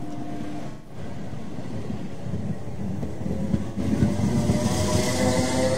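At 0.70 s the sound turns smeared and noisy until 0.97 s. This is AAC frame loss with concealment. The decoder lost data and rebuilt the gap from the last good spectrum. The gap spans roughly 170 ms, which fits about four missing frames. At 3.68 s a shorter patch follows, ending at 3.78 s. It is about 85 ms, consistent with two lost frames.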